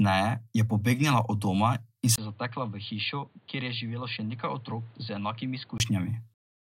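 It's a speech clip, and at 2.16 s there's a brief dropout before the sound goes dull and boxy, cut off above 4.7 kHz, around 10 dB quieter, with new faint background noise. It clears at 5.8 s, likely an input switched to a poorer device and back.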